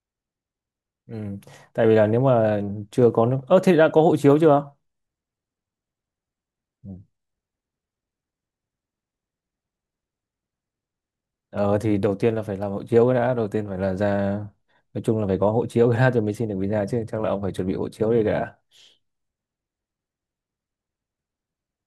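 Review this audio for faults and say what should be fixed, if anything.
Nothing stood out on listening to this speech recording, so there is nothing here to fix.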